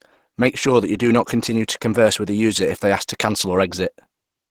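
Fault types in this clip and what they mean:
Opus compression: The speech sounds plainly muffled and hoarse, with a rough, grainy edge on voiced sounds. This is likely low-rate Opus in its hybrid speech mode, consistent with a bitrate around 16 kbps. The full bandwidth is kept, but the upper bands are filled in rather than carrying clean detail. On a spectrogram, harmonics above the low range blur into a noisy, speckled texture. The waveform shows no obvious trace.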